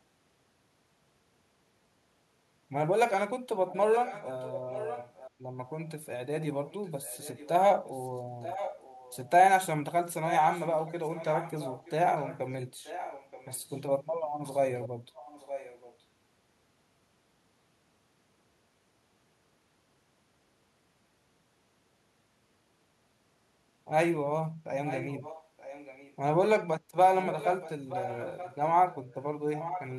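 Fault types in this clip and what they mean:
echo leak: The far end is likely playing the call over a loudspeaker while its echo canceller fails to remove that sound from its microphone pickup, so part of it is sent straight back down the line. The result is a second copy of the speech trailing the original by about 0.93 s and roughly 10 to 15 dB quieter. It appears in six stretches between 3.69 s and 29.95 s as a lagging repeat beneath the talker.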